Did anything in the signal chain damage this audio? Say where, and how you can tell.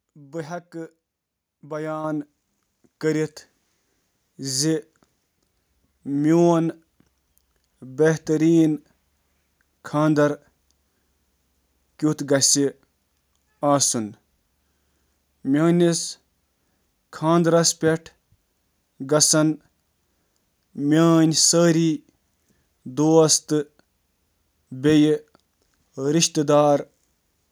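Yes: a microphone volume stepped up fault at 2.04 s, introduced at the call-processing stage. At that instant the whole signal, speech and background noise alike, jumps by about 6 dB in a single step and stays there. Because the noise floor rises together with the speech, this is not the talker getting louder. The call software's gain control judged the input too quiet and raised the microphone device's input volume in one abrupt increment instead of ramping it.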